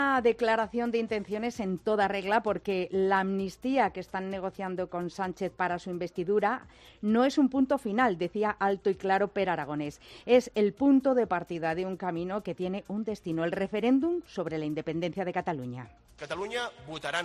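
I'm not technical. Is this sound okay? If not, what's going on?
Yes, from a technical standpoint the signal holds steady the whole way, with nothing going wrong at any point.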